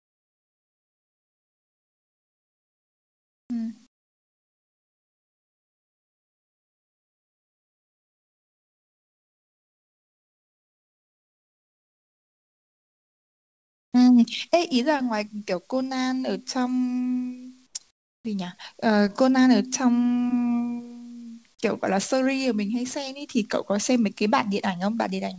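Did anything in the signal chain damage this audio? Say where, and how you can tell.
Yes. In the pauses of this speech the background goes flat and featureless: from 0.0 to 3.50 s, from 3.87 to 13.93 s, and briefly from 17.67 to 17.75 s and 17.91 to 18.25 s. It also sits about 14 to 21 dB lower than the real room sound. This is comfort noise in place of the background, likely from discontinuous transmission in the call path. The sender stopped sending during silence, and the receiver filled the gap with synthetic noise, all within the G.722 band that stops at 8 kHz.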